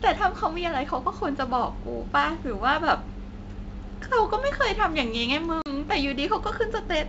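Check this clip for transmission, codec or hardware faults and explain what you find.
One transmission fault is audible in this speech clip. Packet loss on an ADPCM call, 5.62 to 5.75 s: about 40 ms of the G.722 stream, roughly two packets, drops to hard-edged silence. The decoder's adaptive predictor and step size then drift from the sender's, so the speech resumes with brief slight distortion that settles within tens of milliseconds. The surrounding wideband sound shows faint coding hiss at most, which fits G.722 at 64 kbit/s.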